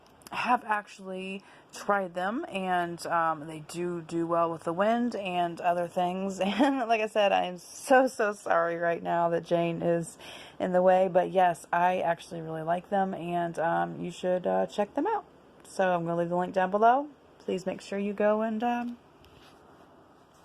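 Nothing here needs pointing out, since the audio runs along without any technical faults to flag.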